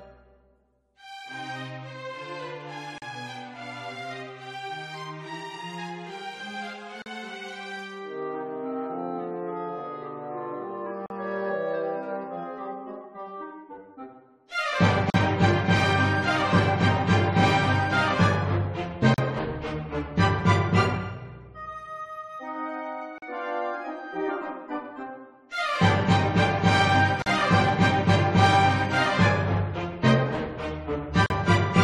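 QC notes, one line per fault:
2.98 to 31.30 s, gap at a join of encoded pieces: a dropout of about 40 ms at 2.98, 7.02, 11.06, 15.10, 19.14, 23.18, 27.22 and 31.26 s, landing every 4.0 s. It's what you get when separately encoded chunks are butted together untrimmed: each chunk's encoder start-up silence and last-frame padding stay in, so the sound cuts out with softened edges and then picks up right where it left off.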